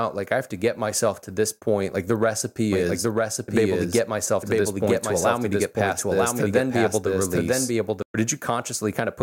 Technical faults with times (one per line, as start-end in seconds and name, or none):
2.72-8.02 doubled audio track